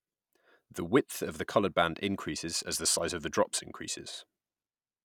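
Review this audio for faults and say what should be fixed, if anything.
No faults found; nothing needs fixing.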